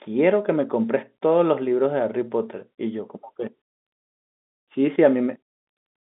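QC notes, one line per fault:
The speech sits in a telephone band carried by G.711 telephone coding, with content running from about 200 Hz to 3.6 kHz and nothing above 3.8 kHz, and no technical faults are present.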